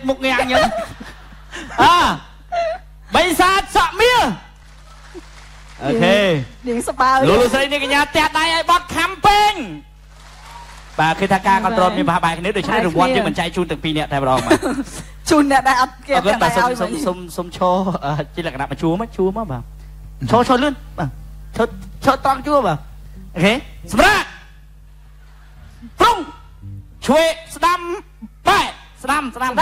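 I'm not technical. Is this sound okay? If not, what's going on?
Yes, nothing wrong can be heard in this sound, so there's nothing to fix.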